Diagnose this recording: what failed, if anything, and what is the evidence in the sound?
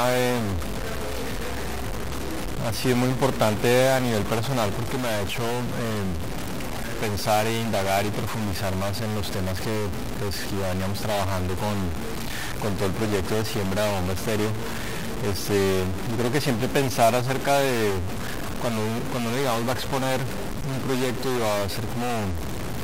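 A stuck bit, likely at the converter, gives harsh buzz throughout. Quiet gaps fill with noise, the waveform steps by about -25 dBFS, and the spectrogram shows broadband haze.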